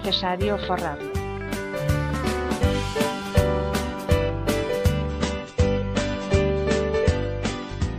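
An adaptive stream drops to a lower bitrate from 5.07 s to the end of the clip, most likely because the connection slowed and the player switched to a cheaper version of the same audio. The change is abrupt with no gap: the treble disappears above 8.3 kHz, and the sound takes on a thinner, swirly, artefact-laden quality. This fits a step down from roughly 128 kbit/s MP3 to something near 32 kbit/s.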